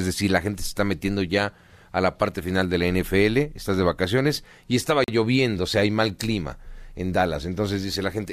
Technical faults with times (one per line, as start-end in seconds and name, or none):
5.04-5.08 gap between stream segments